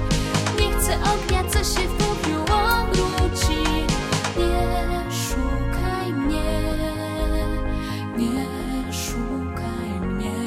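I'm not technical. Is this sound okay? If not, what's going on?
Yes, this sound is okay, and nothing is going wrong with it.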